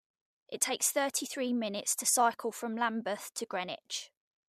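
AAC frame loss with concealment occurs at 0.53 s and again at 3.37 s in this speech. Each time a single coded frame of about 10 ms is missing, and the decoder fills the hole by reusing the last good spectrum with its phases scrambled. Because the gap is so short, there is no fade to silence, just a brief smeared, noisy blip in the speech. The short frame length likely comes from a low-delay AAC stream.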